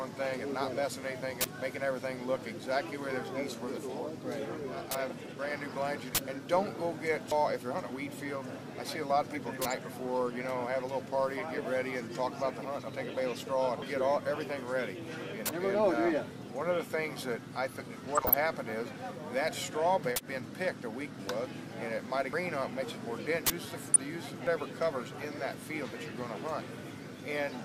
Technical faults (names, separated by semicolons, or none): DAB burbling